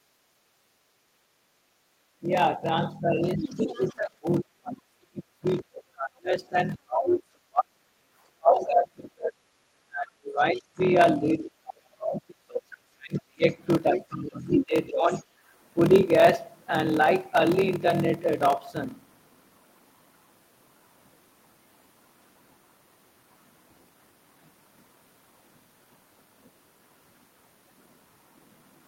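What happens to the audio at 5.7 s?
At 5.7 s the speech sits inside a stretch from 2.21 s to 7.78 s where it is pushed down hard. It dips by as much as about 35 dB, for roughly four seconds in all. This is speech suppressed in double talk. The likely cause is an echo canceller facing both sides talking at once. It cannot tell its own talker from the loudspeaker echo, so it turns everything down.

A block size mismatch (padded) is also present at this moment, as it is across the whole clip. Each short block of audio is read into a longer slot, and the leftover space is filled with silence. That regular gap makes a buzz at 41.7 Hz. The audio also runs slow, at 0.889 times normal speed, with its pitch roughly unchanged. The figures fit 1024-sample blocks being read as 1152-sample ones.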